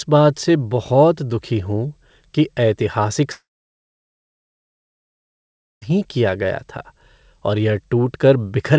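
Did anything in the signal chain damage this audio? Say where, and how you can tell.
Yes, at the network stage. From 3.32 to 5.84 s, after "दुखी हूँ कि ऐतिहासिक", the sound fades as a brief buzz or hiss into about 2.4 s of silence, resuming at "किया गया था" with material gone. This is a long network dropout, likely lost packets. Unlike a short concealment glitch, the fill gives up, and nothing is replayed.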